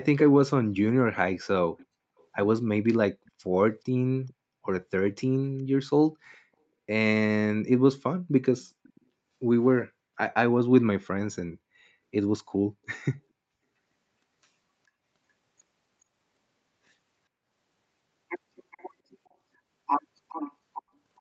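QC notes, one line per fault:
0.18–0.29 s, 1.77–2.24 s, 3.26–3.31 s, 4.27–5.1 s, 8.62–9.01 s, 18.71–18.86 s, 20.29–21.2 s: echo leak. A delayed copy of the speech trails it by a steady 420 ms, about 10 dB down at first and much quieter later. It is likely a far-end loudspeaker's echo escaping cancellation. Unlike reverberation, it is a separate repeat rather than a smear.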